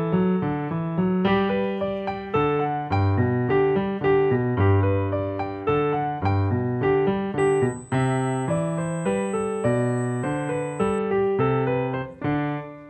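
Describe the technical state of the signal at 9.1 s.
A steady, fixed-pitch whine at 8 kHz sits well below the sound from 7.39 to 10.99 s: USB whine, from the bus's 125-microsecond microframe current draw leaking through power or ground.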